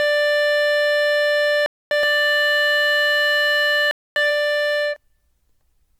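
Throughout, the music sounds swirly, smeared and hollow, with blurred attacks. This is generation loss, likely from about seven passes through 128 kbit/s MP3, each adding fresh quantisation damage.

At 1.66 to 1.91 s a 250 ms hard-edged silence cuts in. This is a gap between chunks: 2 s blocks are joined with silence left between them.

From 2.03 to 4.96 s a doubled audio track appears. A second full-band copy, about as loud as the original, trails roughly 0.7 s behind. It is dry and starts and stops abruptly.

At 3.91 to 4.16 s the same 250 ms gap between chunks returns, exactly one chunk plus one gap after the first.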